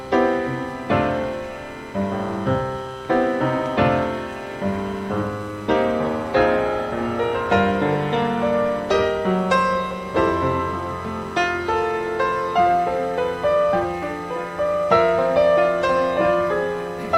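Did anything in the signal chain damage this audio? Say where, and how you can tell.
No, nothing audible points to damage at any stage of the signal chain.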